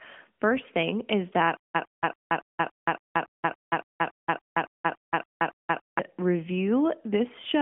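Playback likely stalled from 1.57 s to 5.99 s, just after "thing is that", and kept replaying its last fragment: a stutter with silent gaps. A 106 ms burst returns 15 times, every 282 ms, with 176 ms of silence between, and the speech it should have carried is lost.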